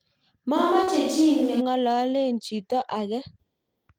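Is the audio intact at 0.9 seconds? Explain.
No. From 0.58 to 1.59 s the sound turns roomy and hollow with thinner bass and faint background noise at a similar level, likely a switch to a distant microphone. Just before, from 0.83 to 0.89 s, a brief smear appears: short concealed packet loss dropped about 40 ms, and the receiver filled 37 ms by extending the preceding sound.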